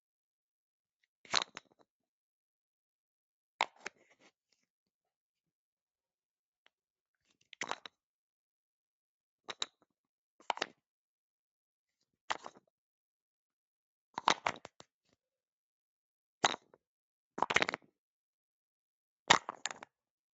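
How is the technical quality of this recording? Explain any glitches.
No glitches or faults can be heard anywhere here.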